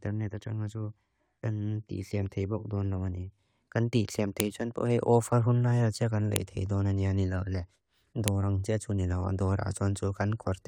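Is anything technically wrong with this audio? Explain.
Yes. Sharp clicks land at 4.40, 6.36 and 8.28 seconds, a case of a file header played as audio. The speech appears to be separate pieces joined without stripping each piece's header, so those few dozen bytes of metadata are decoded as samples. Each one is a loud snap regardless of the surrounding speech. On a waveform it shows as a brief spike. On a spectrogram it is a thin vertical line spanning all frequencies.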